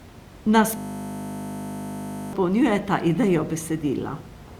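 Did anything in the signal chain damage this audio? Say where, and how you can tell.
Yes. A system hang loop at the driver or buffer stage from 0.77 to 2.33 s replayed one 20 ms buffer over and over, producing a steady 50 Hz buzz.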